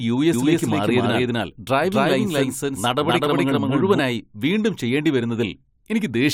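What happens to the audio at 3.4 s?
At 3.4 s you're inside a doubled audio track running from 0.33 to 3.99 s. A second copy of the speech trails roughly 0.3 s behind, about as loud, with no decay. It's likely a slower capture path recording the same signal twice.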